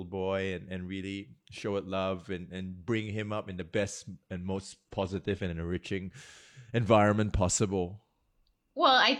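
Just after "and bring him up", from 3.50 to 5.50 s, the speech abruptly picks up more codec artefacts, then snaps back with no gap. This is an adaptive stream at a lower bitrate, which fits a drop from roughly 96 kbit/s AAC to 24 kbit/s HE-AAC.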